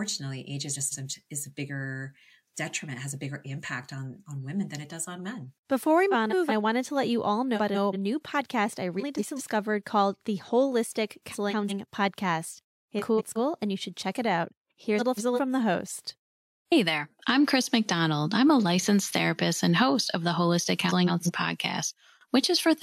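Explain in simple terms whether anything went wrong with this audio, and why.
Something did go wrong: the speech has frames out of order at eight points, starting at 0.73, 6.11, 7.55, 8.99, 11.31, 12.99, 14.99 and 20.88 s. Each time, two neighbouring chunks of about 0.19 s arrived swapped and were played that way, so a roughly 0.4 s stretch comes out with its halves reversed. It sounds like a brief garbled flutter. Nothing is missing, just misordered.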